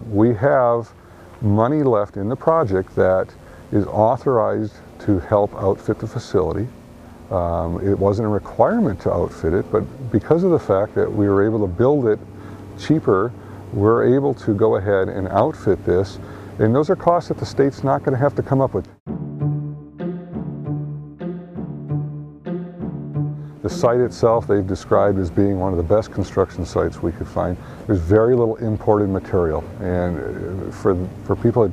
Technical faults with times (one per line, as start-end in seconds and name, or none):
2.46-3.96 mains buzz